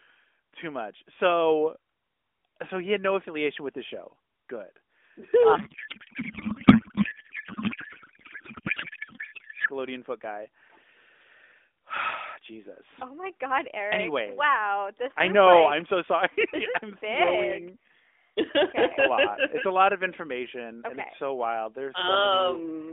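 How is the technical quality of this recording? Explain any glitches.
The recording has one clear glitch: a codec payload misread from 5.56 to 9.69 s, about 4.1 s long. The speech sits in a telephone band of roughly 300 Hz to 3.5 kHz, carried by the AMR narrowband mobile codec with only light coding damage.

During that stretch the speech gives way to garbled noise and warble that barely tracks it. Octet-aligned AMR frames appear to have been unpacked as bandwidth-efficient ones. The decoder still accepts every frame, but each field comes from the wrong bit positions, so the codec synthesises nonsense from scrambled parameters. Packet loss would instead produce brief gaps or smeared repeats. This is continuous garbled babble that ends at 9.69 s, once both sides agree on the packing again.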